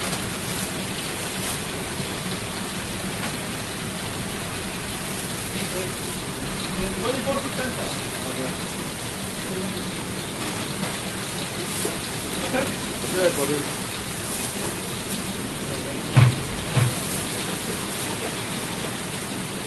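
At 6.15 s there is a skip ahead: about 0.4 s of the everyday sound is simply missing, and the audio on either side is butted together with no gap, no fill and no repeated material. That points to a stretch dropped in transit or discarded when the jitter buffer overflowed while later audio was already queued. Unlike a dropout, there is no silence or concealment; the sound just lurches forward.

From 6.25 s to 7.71 s a jitter buffer speed-up follows. Having too much audio in hand, the receiver trims short pitch-period-sized slices over and over, shedding roughly a tenth of a second in total. Playback runs at about 106% speed with pitch unchanged, so the sound feels slightly rushed rather than chipmunk-like. This separates it from a resampling error, which would raise the pitch along with the tempo.

Between 16.67 s and 18.93 s a doubled audio track appears: a full-band copy trails the original by about 0.7 s at roughly 5 dB lower level, switching in and out abruptly. 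The likely cause is a second, slower capture path or a misaligned edit mixed back in. Unlike an echo or reverberation, the copy carries no decay or room colour and does not repeat, and the Opus call path's roughly 12 kHz band limit is shared equally by both copies.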